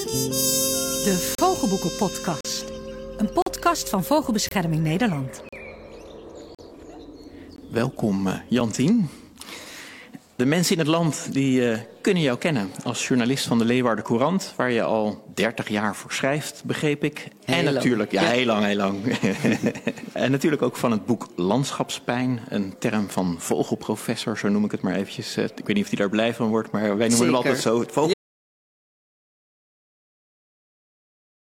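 The audio is broken by short, hard-edged holes of silence at 1.35, 2.41, 3.42, 4.49, 5.49, 6.55, 7.56 and 8.60 s, each about 20 to 43 ms long except the last, which is only about 5 ms. These are gaps between stream segments: spaced roughly once per second, they fit 1-second segments whose timestamps don't quite meet, with the player filling each gap with silence. From 28.14 s to the end the sound cuts out to silence with no room tone, an audio dropout to silence, likely from the input being lost while the recorder kept writing silence.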